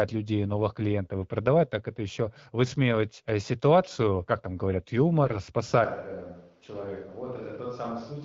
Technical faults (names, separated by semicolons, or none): AMR bit errors; switch to a distant microphone